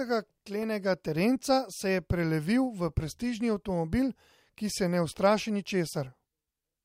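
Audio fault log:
0.63 s, underrun with held sample: the buffer ran dry and the output froze flat for 0.6 ms just before "terenca se je prelevil"; about 0.7 ms of audio was lost.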